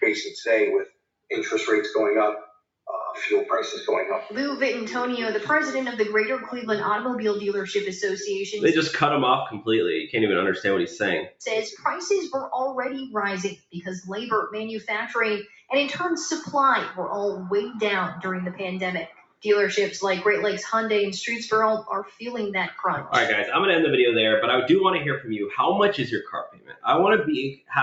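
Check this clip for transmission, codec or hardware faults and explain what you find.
There are two faults: a speech-tuned noise suppressor, plus brief level collapses where it acts hardest. The 8 kHz ceiling from the call path is expected.

Throughout, the level pumps by roughly 5 dB as held sound sinks and attacks pass. A noise suppressor built for speech was applied to non-speech sound and reads steady content as noise.

Sound cut by the noise suppressor occurs at 0.86–1.05, 11.25–11.41, 13.55–13.79, 15.43–15.70, 19.06–19.45, 22.04–22.22, 26.24–26.85 and 27.52–27.72 s. Each time the sound briefly hollows out, dropping by about 13–21 dB as the suppressor clamps sustained or decaying material.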